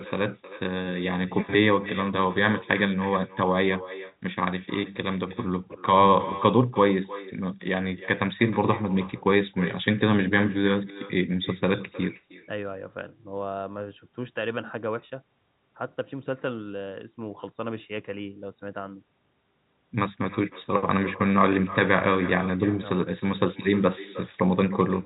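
From start to finish, the speech carries an echo with no canceller. The far end seems to be playing the call through a loudspeaker that its microphone picks up, and nothing subtracts it, so each phrase returns roughly a third of a second later, about 16 dB down and sounding thin. On a waveform, every burst has a smaller trailing copy. A spectrogram shows faint duplicated harmonic patterns offset in time, all kept under the 4 kHz telephone ceiling of the G.711 coding.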